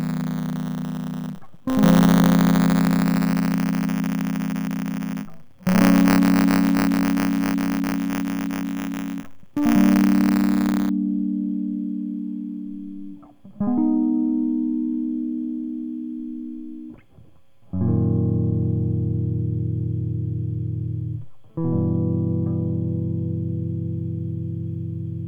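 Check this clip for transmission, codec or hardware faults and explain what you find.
One hardware fault is present: buffer tearing, from the start to 10.9 s. The music carries a steady robotic buzz at 100 Hz. The writer and reader of the ring buffer have slipped. A small slice of each period replays audio about 20 ms old. Hard joins bracket it.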